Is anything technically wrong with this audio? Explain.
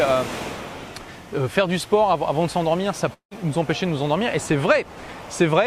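Yes. A long network dropout, from 3.13 to 3.33 s: incoming audio likely stopped arriving, and the receiver stretched the last sound into a fading buzz for about 176 ms, leaving roughly 0.1 s of silence. When playback resumes, about 180 ms of the original is missing.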